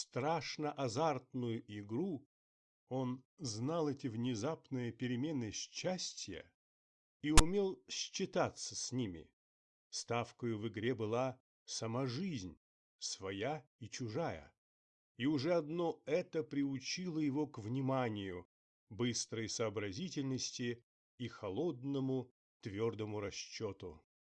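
A brief burst of harsh static appears from 7.38 to 7.40 s. This is file tags played as audio: text gives a lopsided rasp, then padding drops to silence.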